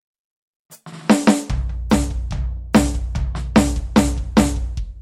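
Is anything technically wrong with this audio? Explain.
No, nothing is technically wrong with this music recording.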